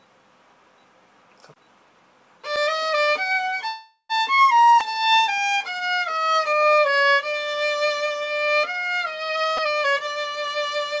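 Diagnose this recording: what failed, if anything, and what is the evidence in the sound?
Network stage, call audio freeze: packets were likely held up in transit until the jitter buffer ran dry. From 3.68 to 4.12 s the last sound is stretched into a fading buzz or hiss, with about 90 ms of silence, then the audio resumes where it stopped, nothing lost, only 414 ms of added delay.

Network and jitter buffer, skip ahead: just after, at 4.36 to 4.40 s, a stretch of audio was dropped while later audio was already waiting. Roughly a fifth of a second vanishes, and the two sides are joined through a fill of only 9 ms, so playback lurches forward.

Call processing, jitter buffer slow-down: from 4.63 to 6.69 s the receiver rebuilt its reserve by repeating single pitch periods and slivers of pauses. The audio runs at 92 percent speed with unchanged pitch, stretched by 177 ms, with drawn-out sounds.

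Driver or buffer stage, repeated buffer: the output device missed its deadline and replayed a 4 ms block, which fits a 64-sample buffer at a 16 kHz rate. At 4.80 s it plays once extra, and at 9.57 s it plays three extra times.

Call processing, jitter buffer speed-up: from 9.29 to 10.93 s the buffer held excess audio and shed short pitch-period pieces repeatedly, about 300 ms in total. Playback runs at 118 percent speed at the same pitch and sounds hurried. Across this span nothing reaches above 8 kHz, which fits the G.722 call codec.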